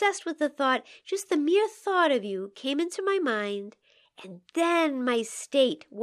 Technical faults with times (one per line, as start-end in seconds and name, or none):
none